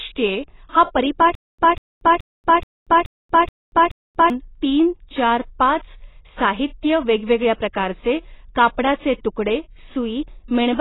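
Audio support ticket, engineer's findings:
Stutter with silent gaps, 1.35 to 4.30 s, after "हा परीपाठ" and before "तीन चार पाच साहित्य". A 193 ms fragment repeats seven times, each followed by about 234 ms of digital silence, for a 427 ms period. Likely a stalled player or stream replaying its last buffer on each retry. Intended audio in that span is lost.

AAC compression, throughout. Nothing above 3.9 kHz, with a dull, smeared band and heavy codec damage. AAC-LC is the likely encoder. The low cut-off fits a starved bitrate around 16 kbps, where quantisation discards most of the upper spectrum.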